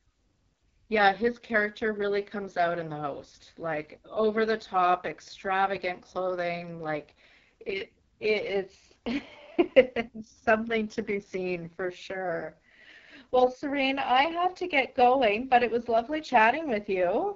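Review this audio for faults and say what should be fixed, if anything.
Throughout the speech, the sound is rough and raspy, with a buzzy, grainy edge and a thin, hissy top end. These are the marks of the AMR wideband (HD Voice) codec at its lowest setting. Below 6.4 kHz the codec rebuilds speech from a coarse model of the vocal tract, driven by sparse pulses. The damage is heavy here, which fits a rate of about 6.6 kbit/s. Above that, the band is only shaped noise, and nothing remains above 7.3 kHz. To prevent this, run AMR-WB at 12.65 kbit/s or higher, or use a higher-quality codec.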